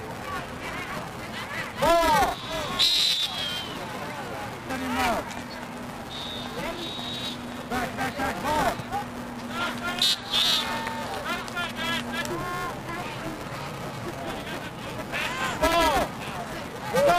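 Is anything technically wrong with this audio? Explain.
Yes, there's buffer tearing running through the whole clip. The writing side and the playback hardware have drifted, so they cross inside every period, and about a fifth of each buffer plays audio from roughly ten milliseconds earlier, with hard splices on both sides. That repeats at 345 Hz, which fits a 128-sample buffer, so you get a steady robotic buzz riding on the sound that's only there while signal is present.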